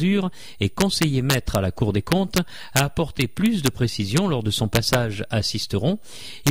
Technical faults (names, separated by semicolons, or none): integer overflow